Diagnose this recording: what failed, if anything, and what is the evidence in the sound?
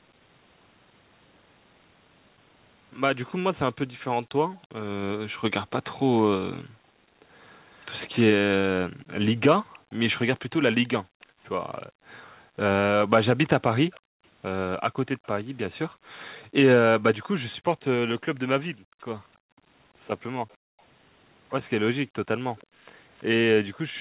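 Echo leak, 3.27 to 15.44 s and again 20.49 to 23.99 s: a faint delayed copy of the speech trails it by about 329 ms, around 30 dB down in the first stretch and nearer 35 dB in the second. This is likely a call-processing fault: the far end's echo canceller left part of its loudspeaker pickup in the microphone signal and sent it back.

Background gated by the echo canceller, from 4.57 s to the end of the clip: the room sound dips, by up to about 40 dB at its deepest, then returns. That is call processing again: while the loudspeaker played, the canceller pulled the microphone down hard and released it afterwards, all heard through the 4 kHz narrowband ceiling of the call codec.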